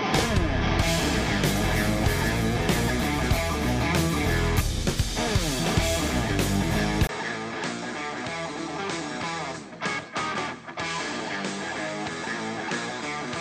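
At 7.07 s the sound drops out for about 20 ms and comes back duller and slightly quieter, with a new noise floor, which points to an input likely switched to a poorer device. On a spectrogram, everything above 8.7 kHz vanishes from there to the end, and the waveform steps down by roughly 5 dB.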